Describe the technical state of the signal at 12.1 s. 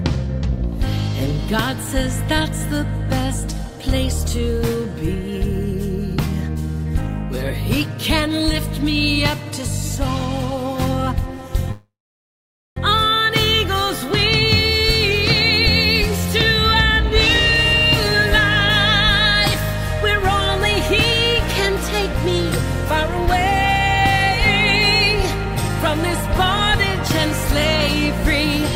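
At 12.1 s the signal is inside a call audio freeze running from 11.71 to 12.78 s, likely from delayed packets draining the jitter buffer. The last sound trails off as a fading buzz, then about 850 ms of silence follows. Nothing is lost; everything after plays about 1.05 s late. On a spectrogram this shows as a smeared band fading into a blank column; the waveform decays to a flat line.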